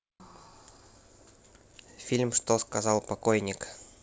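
No technical faults turn up in the speech, which carries the ordinary character of a wideband call path, with nothing above 8 kHz, consistent with G.722 coding at 64 kbps.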